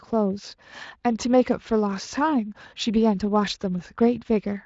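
No technical faults are audible; the speech runs through a Speex encoding that leaves only light coding texture and no content above about 7.6 kHz.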